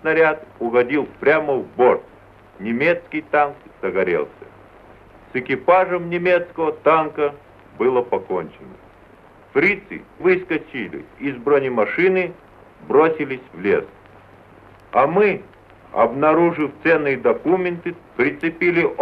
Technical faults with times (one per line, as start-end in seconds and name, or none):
none